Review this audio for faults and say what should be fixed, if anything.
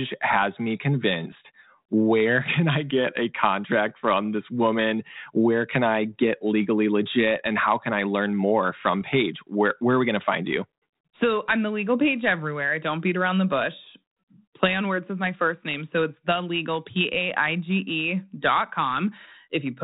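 Two short, rough pops break into the speech, from 1.32 to 1.35 s and again from 9.01 to 9.03 s, each with a brief change in level and a gritty tail. These are bit errors on an ADPCM link, at a rate of very roughly a tenth of a percent. Over the narrowband G.726 ADPCM path, whose sound fits 32 kbit/s, each flipped bit corrupts the decoder's step size and predictor, so the damage rings on for a few milliseconds. Forward error correction or error concealment on the link would prevent this.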